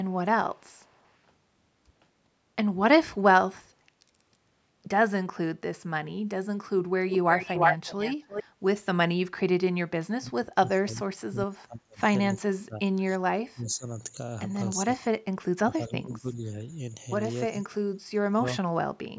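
Echo leak at 0.58 to 1.11 s: a faint delayed copy of the speech, roughly 40 dB below it, trails the talker by 422 ms. The far end is likely playing the call over a loudspeaker, and its echo canceller did not cancel everything its microphone picked up. At 7.09 to 8.44 s the leak returns much stronger, about as loud as the speech itself, now 350 ms behind, so the talker hears their own speech come back clearly doubled.

Speech suppressed in double talk at 9.76 to 12.01 s, 12.34 to 13.87 s, 14.77 to 16.43 s and 17.51 to 18.83 s: while both sides talk at once, the speech sinks. The echo canceller likely cannot tell this talker from its own loudspeaker echo and attenuates both. The deepest drops are about 35, 30, 20 and 25 dB, covering around 2 s in the first stretch and about 1 s in each of the others.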